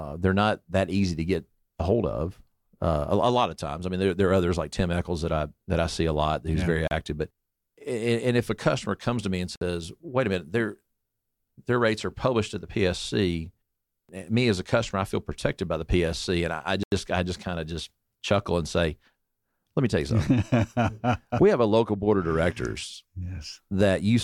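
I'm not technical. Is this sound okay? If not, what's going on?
No. The audio has three short Bluetooth stalls, likely from wireless interference delaying data so the headphones briefly ran out. The speech drops to silence and resumes at 6.88 to 6.91 s (after "yeah very"), 9.56 to 9.61 s (after "comes to me and") and 16.83 to 16.92 s (before "I just kind of").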